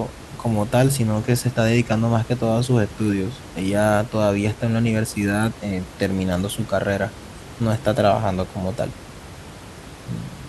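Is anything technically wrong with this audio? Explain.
Yes. From 1.38 to 1.41 s there is a corrupt frame decoded. A couple of compressed frames arrived with flipped bits, and the decoder played them anyway. Their gains and spectral codes were misread, so energy landed at the wrong frequencies. The result is a brief chirpy burst peaking around -10 dBFS. The room noise sits about 18 dB under the speech. On a spectrogram it shows as a short, sharp-edged block of misplaced energy, and in the waveform as an abrupt spike.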